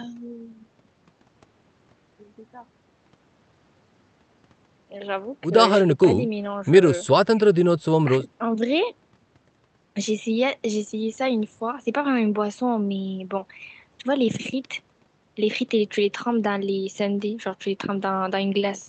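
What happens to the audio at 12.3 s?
Nothing goes wrong at 12.3 s: the speech continues intact through the call path, with no dropout, glitch or distortion at that moment.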